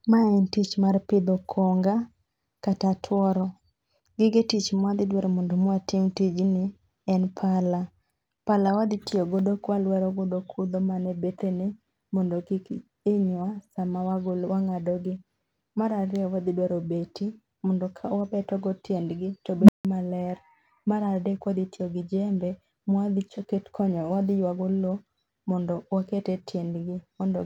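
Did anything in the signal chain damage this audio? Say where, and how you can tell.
Yes: an unstable filter in call processing, after "mondo kawabetogo tiendgi to". A tone around 200 Hz swells over about 100 ms from 19.59 s, clips, then drops into roughly 160 ms of silence until 19.85 s. Unlike acoustic feedback, it cuts out rather than sustaining.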